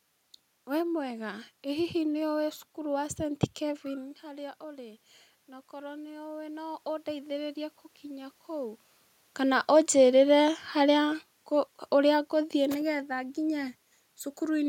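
From 5.7 s to 8.87 s the automatic gain rises: the speech input drops by about 14 dB, and the gain control responds by lifting its gain about 5 dB over roughly three seconds. The voice and the room noise swell together, which is what separates this from the talker moving around 4 s and again near 9 s, where only the voice level shifts against a steady background.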